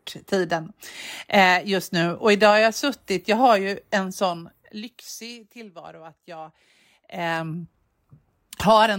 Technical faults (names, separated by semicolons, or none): zipper noise